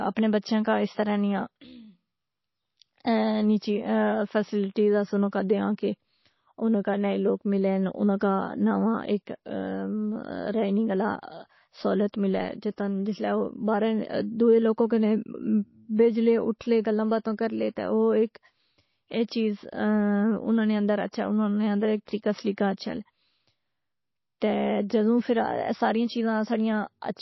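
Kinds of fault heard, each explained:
MP3 compression: nothing is heard above 5.8 kHz, and the speech has a plainly audible watery swirl as weak detail flickers from frame to frame, likely MP3 at a very low bitrate near 24 kbps. That flicker separates it from a plain low-pass filter, which only dulls.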